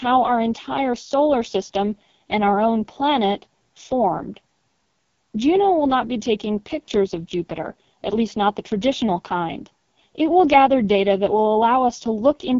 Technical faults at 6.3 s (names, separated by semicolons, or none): AMR wideband (HD Voice) codec